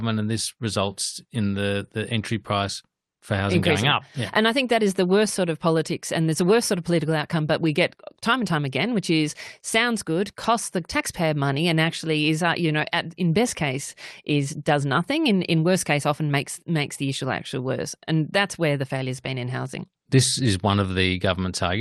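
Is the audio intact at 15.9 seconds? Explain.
Yes, at 15.9 seconds the speech is intact, passing through the WebRTC call path with nothing beyond that path's ordinary coding.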